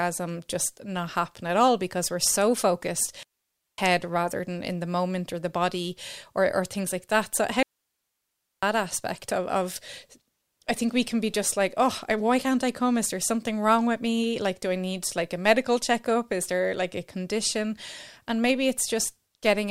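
Speech with two digital wireless dropouts, the first from 3.23 to 3.78 s (a 0.55 s mute) and the second from 7.63 to 8.63 s (a 1.0 s mute). Each is a clean hole of near silence, entered and left through a very short fade, with no noise burst on either side. That signature points to a digital radio link losing too much data and the receiver muting its output rather than passing corrupted audio.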